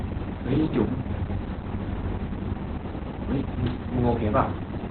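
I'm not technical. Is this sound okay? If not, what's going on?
No. From start to finish the speech sounds muffled, hoarse and a little robotic, with nothing above about 4.3 kHz. This is heavy Opus voice compression: to save data, the coder keeps only a narrow telephone-like band and rebuilds the voice roughly.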